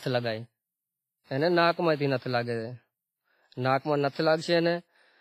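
Throughout the speech, heavy WMA compression at what sounds like a low bitrate, likely around 24 kbps, leaves ringing, washy hiss; the spectrogram shows gaps and nothing above 15.5 kHz.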